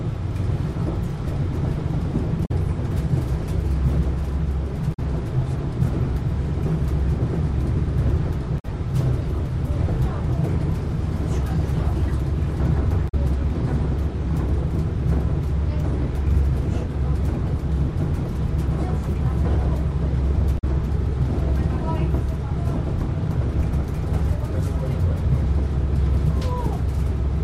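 Damaged data in the compressed stream corrupts short stretches of frames, so the decoder misreads them, loses sync and has to hunt for the next valid frame header before decoding cleanly again. Each time this lands as a brief glitch of roughly 0.09 s, at 2.42–2.51 s, 4.90–4.99 s, 8.56–8.65 s, 13.05–13.14 s and 20.55–20.64 s, with clean decoding resuming right after each one.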